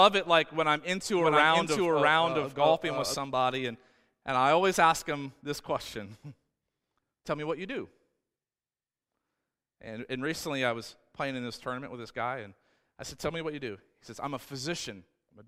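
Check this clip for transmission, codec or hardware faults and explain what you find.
There's one fault here, a doubled audio track, running from about 1.16 s, right after "like when I'm into", to 3.14 s, just before "and and I always". A second, equally loud full-band copy trails roughly 0.7 s behind, dry and switching abruptly, likely from a slower second capture path.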